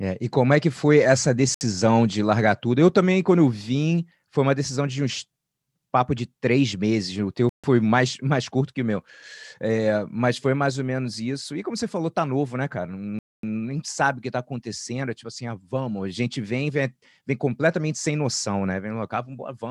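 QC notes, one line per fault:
1.54 to 1.61 s, Bluetooth stall: between "é que foi essa" and "de largar tudo" the speech drops to dead silence for about 66 ms, then resumes. Likely a wireless hiccup where delayed packets left the playback buffer empty until retransmissions caught up. On the waveform the envelope falls abruptly to a flat line and restarts just as sharply; the spectrogram shows a clean vertical gap across all frequencies, with no fade at either edge.
7.49 to 7.64 s, Bluetooth stall: a longer silent gap of about 144 ms cuts into the speech, again hard-edged at both ends. The receiving side likely ran out of audio while waiting for held-up packets, so output simply stopped and picked up again once data arrived. The waveform shows a flat stretch, and the spectrogram shows a blank full-band column with straight vertical borders where the energy cuts off and returns.
13.19 to 13.43 s, Bluetooth stall: after "tá novo né cara" the audio goes silent for about 244 ms before "sabe o que tá" begins. 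This is the longest dropout, likely a quarter-second underrun while the buffer waited on resent packets. The gap reads as a pause that wasn't spoken. The waveform drops straight to a flat line, and the spectrogram shows a wide empty band spanning the full frequency range with abrupt edges.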